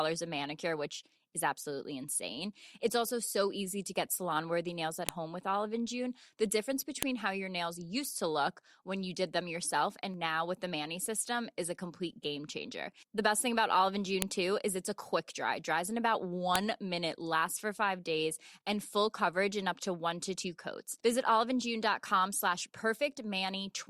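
Sharp, loud clicks land at 5.09 s, between "salon worthy nails at" and "home with", at 7.03 s just before "how your nails used", at 14.22 s just before "too is it's a", and at 16.56 s. Each is a file header played as audio: pieces of speech were joined with their WAV headers left in, so those bytes play as a brief burst. Unlike clipping or dropout clicks, these snaps ignore the speech level and mark the joins.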